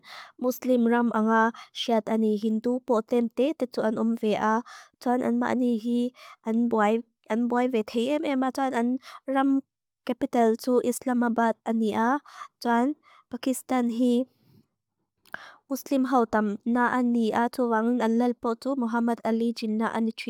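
No technical faults are audible anywhere in the speech recording.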